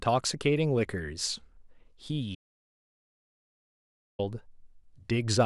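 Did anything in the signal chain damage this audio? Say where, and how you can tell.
Yes. The speech has an audio dropout to silence from 2.35 s to 4.19 s. The sound stops mid-flow and returns just as abruptly, about 1.84 s later. The gap is silent, with no room tone or hiss underneath. That points to the input stage, not the acoustics. The likely cause is that the device or its link dropped out while the recorder kept writing empty samples. Whatever was said in that stretch is lost.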